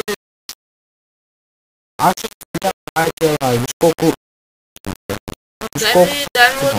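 From start to finish the audio carries a gritty, grainy distortion that moves with the sound itself, with the error sitting only about 10 dB below the signal. This is low bit depth without dither, likely from the signal being rounded to very few levels, which fits a 4-bit word length. The error is tied to the waveform rather than random, and that separates it from ordinary hiss or dithered noise.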